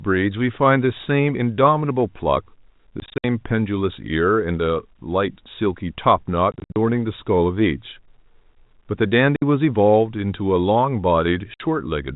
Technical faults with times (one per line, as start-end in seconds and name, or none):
3.00-3.24 packet loss filled with silence
6.52-6.76 packet loss filled with silence
9.36-9.42 packet loss filled with silence
11.54-11.60 packet loss filled with silence